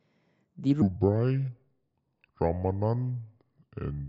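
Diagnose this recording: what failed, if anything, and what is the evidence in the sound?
From 0.82 s to the end, the speech drops abruptly into a deep, slow register, a section at the wrong speed running at 0.671 times the original rate, so pitch falls by about seven semitones. Tempo and pitch move together, which separates this from a pitch-shifter or time-stretch, where one changes without the other. The abrupt switch points to a playback or resampling stage, likely a clock mismatch where that part was read at the wrong sample rate.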